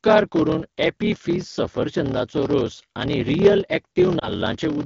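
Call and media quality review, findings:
Block size mismatch (padded), whole clip. Steady buzz at 38.3 Hz, audio running slow at 0.889x, pitch about normal. Probable cause: buffer handoff between stages. Zero-padded gap in every block. Fits 1024-sample writes into larger reads.

Lost AMR speech frames, 4.19 to 4.31 s. Brief dip or warble, then weak or rough recovery. Probable cause: radio-side frame errors in the AMR-WB decoder path. Decoder concealment repeating the last good parameters with falling gain. Consistent with one lost 20 ms frame.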